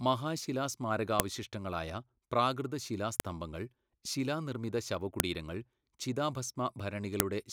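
Sharp, loud clicks snap through the speech at 1.20, 3.20, 5.20 and 7.20 s, exactly 2 s apart. This is a file header played as audio: each 2-second piece was joined with its WAV header intact, so those header bytes sound as a brief burst.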